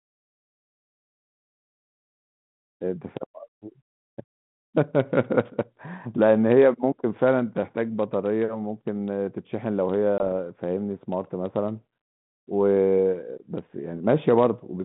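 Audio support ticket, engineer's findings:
Packet loss on ADPCM call, 10.18–10.23 s: 20 ms flatline, about one packet; slightly distorted resume as G.726 predictor resyncs; spectrogram shows blank column, vertical edges.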